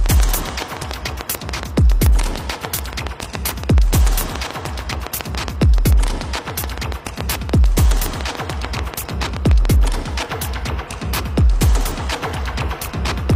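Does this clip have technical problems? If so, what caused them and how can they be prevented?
Yes. A train of clicks runs from 0.06 s to 9.66 s, a regular ticking at about 7 clicks per second, roughly seventy in all, standing well above the sound, around 15 dB louder. Likely cause: periodic interference from nearby equipment or a faulty connection or power supply. Shielding cables, moving away from interfering devices, and using secure connections and a stable power supply prevent it.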